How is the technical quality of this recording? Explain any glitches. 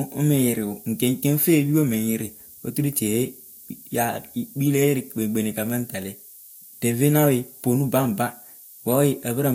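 The speech carries low bit depth with noise shaping for its whole length. Reduced to 8 bits, it picks up rounding error that feedback pushes up in frequency, leaving a steady, thin hiss that rises toward the top of the band, around 20 dB below the speech.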